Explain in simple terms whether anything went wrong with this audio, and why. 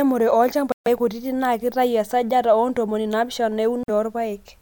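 Twice the speech cuts to silence, then carries on: about 140 ms of dead air at 0.72 s, and a 48 ms gap at 3.83 s. These are likely Bluetooth stalls, where interference delays audio packets and the headphones run out of sound until they arrive.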